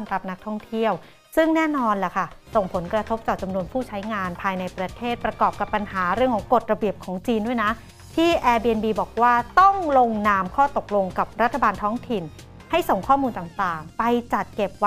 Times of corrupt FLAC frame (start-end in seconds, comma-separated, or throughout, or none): none